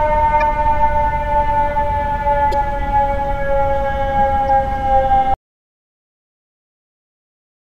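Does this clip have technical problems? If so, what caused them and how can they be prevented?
Yes. Damaged data in a compressed stream at 0.38–0.43, 2.50–2.54 and 4.46–4.50 s: corrupted frames make the decoder lose sync, giving brief glitches. Use checksummed transport and verify files after transfer.

Audio dropout to silence from 5.34 s to the end: the sound cuts off into silence with no room tone, likely because the input was lost while recording continued. Secure connections and monitor input levels while recording.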